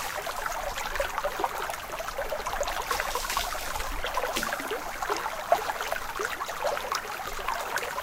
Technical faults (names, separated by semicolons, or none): none